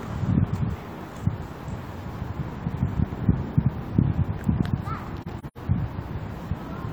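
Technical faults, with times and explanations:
5.22–5.58 s: AAC frame loss with muting. Several brief soft-edged gaps, the longest about a tenth of a second, where lost frames were zeroed and the overlapping windows faded the audio out and in.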